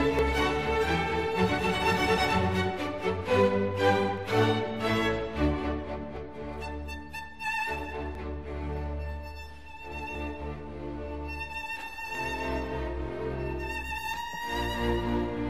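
Periodic USB or driver dropouts run from 0.19 s to 14.14 s, recurring every 1.99 s. At each one, something blocks the USB bus or the audio driver, and a short stretch of around 10 ms is skipped outright rather than filled with silence, so the waveform jumps forward. The result is a steady train of ticks or pops at that fixed spacing, audible wherever sound is present and absent in quiet passages.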